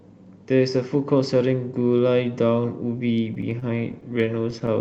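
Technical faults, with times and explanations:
3.25–4.69 s, repeated stalls (stutter): late packets emptied the jitter buffer 17 times, and each brief gap was filled by continuing the sound, so speech drags and stutters without any dropout.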